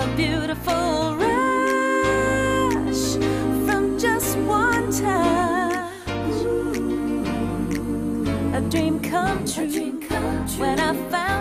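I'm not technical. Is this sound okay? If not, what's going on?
Yes, this sound is okay, with nothing wrong that a listener would notice. You can use it as it is without worrying about a technical problem.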